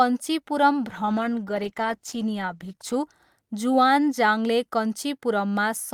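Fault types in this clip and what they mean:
call bitrate drop: From 0.89 to 3.03 s the speech turns rough, watery and dull as the highs vanish. This fits the encoder being pushed from around 48 kbps down to about 13 kbps for roughly 2 s, coding coarsely and trimming the top band until the rate recovers.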